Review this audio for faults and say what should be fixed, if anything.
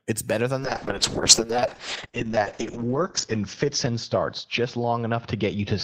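From 0.61 s to the end, the speech turns rough and muffled, losing its top end, worst for about 1.4 s. This is a call bitrate drop: the encoder fell from 64 to 6 kbps, coding coarsely and narrowing bandwidth from 20 kHz to 8 kHz. Ramping bitrate changes gradually and keeping a higher floor would prevent it.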